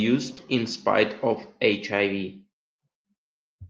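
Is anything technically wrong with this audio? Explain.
Yes. There is a brief smear around 0.35 to 0.47 s: short concealed packet loss, where 20 ms of speech arrived too late, was partly bridged by extending the preceding sound, and stretched timing by roughly 20 ms. At 0.37 to 0.39 s and again at 1.72 to 1.74 s, short rough, noisier patches mark a lost packet rebuilt from error correction. Each time, one 20 ms packet was replaced by the lower-quality copy carried in the next packet.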